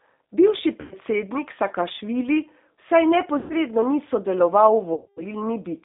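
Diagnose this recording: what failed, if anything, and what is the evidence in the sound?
The whole clip has been through a G.729 codec at 8 kbit/s, so this is a codec-stage problem. The speech sits in a narrow telephone band, roughly 250 Hz to 3.7 kHz, with nothing above. The codec damage is plainly audible: a rough, slightly synthetic edge on the speech, because the decoder rebuilds each frame from a vocal-tract filter, a pitch predictor and a handful of pulses rather than the actual waveform.

On top of that, there's VoIP packet loss concealed by the speech codec, which is a network fault. The gaps are at 0.81–0.94 s, 3.38–3.54 s and 4.94–5.23 s. They cover roughly 100, 120 and 230 ms of lost audio, and the last fits a run of about twenty-three 10 ms frames. In each gap the decoder keeps replaying its last pitch and filter at falling gain, so the sound smears into a buzzy tone or coloured noise that fades. 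Because each frame builds on the previous one, the speech also stays weak for a moment after the packets come back.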